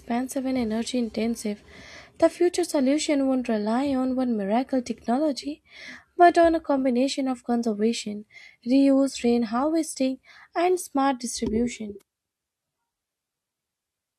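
A short speech recording, and nothing technically wrong turns up anywhere in it.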